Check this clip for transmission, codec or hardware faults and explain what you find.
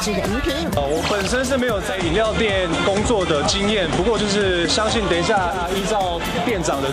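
One fault: digital radio blending to analogue, 1.73 to 5.70 s. The receiver lost its digital stream and cross-faded over 327 ms to FM. Faint hiss enters, and level shifts about 2 dB.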